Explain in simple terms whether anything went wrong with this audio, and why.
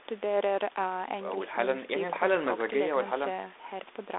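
No, nothing went wrong here.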